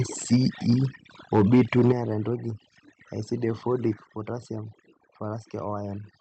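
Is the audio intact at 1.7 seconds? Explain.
No. From 1.34 to 1.92 s the peaks are flattened with a harsh, crackling edge, likely microphone overload driving the converter about 7 dB past its limit and clipping many samples. Overdone noise removal, present throughout, also takes quiet parts of the voice with it, with bands switched off and twinkling specks in the background.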